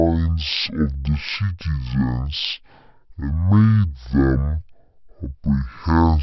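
From the first moment to the end, the whole thing has a wrong sample rate problem: everything runs at half speed and drops a full octave, 12 semitones. That fits 32 kHz audio played back at 16 kHz with no conversion, so the speech comes out slow, low and drawn-out.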